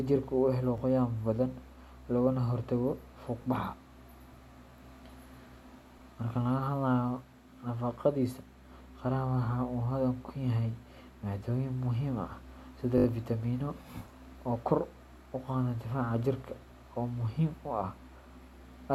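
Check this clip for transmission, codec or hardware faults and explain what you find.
A repeated buffer fault appears three times in the speech. At 0.78–0.80 s and 3.42–3.44 s, a tiny slice is heard twice with a hard join, giving a brief click-like stutter. At 12.98–13.06 s the same slice sounds five times in a row, making a short buzzy stutter. Fresh audio reached the playback device late, so it replayed its last block, which fits a 20 ms buffer. Nothing audible seems to be skipped afterwards.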